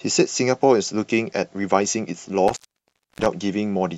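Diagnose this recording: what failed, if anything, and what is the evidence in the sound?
The failure is in the analogue wiring: an intermittent contact. Between 2.48 and 3.26 s the speech drops out, with the line open for about 0.63 s within that span. The dropout is bracketed by crackle as the connection breaks and remakes, and faint hiss remains while it is open. A loose plug or cable conductor momentarily losing contact explains this, since the signal path is physically interrupted rather than muted.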